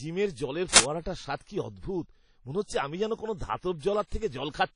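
Speech, with plainly audible ringing, washy codec damage throughout and nothing above 10.1 kHz, a hard spectrogram ceiling, likely from WMA compression at a low bitrate around 32 kbps. At 0.76 to 0.80 s, an uninitialised buffer plays 40 ms of leftover memory as a burst of digital noise, a dense broadband block on the spectrogram and an erratic waveform slab.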